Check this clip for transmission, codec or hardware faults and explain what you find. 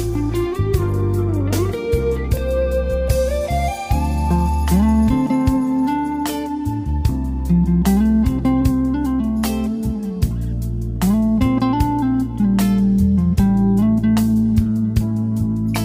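No faults turn up anywhere in the clip.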